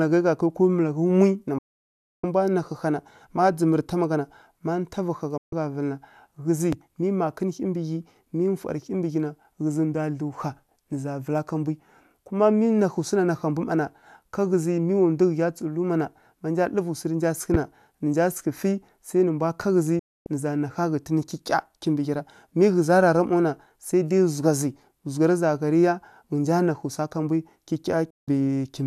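At 1.58 s the speech cuts out for about 0.65 s, and again at 5.38 s for about 0.14 s. This is a digital broadcast dropout: the receiver muted on failed frames, with a fade of about 3 ms. The gap lengths fit roughly 24 ms frames. The audio resumes later, so what was sent during each gap is gone. That distinguishes it from a pause or a level dip. At 6.73 s a loud pop appears, about 10 dB above the speech. It is a single sharp pulse, likely from a switching or static transient. The speech carries on unbroken underneath, unlike a dropout. A second, stronger pop at 17.54 s rises roughly 15 dB above the speech. Two further dropouts follow: at 19.99 s for about 0.26 s, and at 28.10 s for about 0.17 s. Each is a clean mute rather than a click.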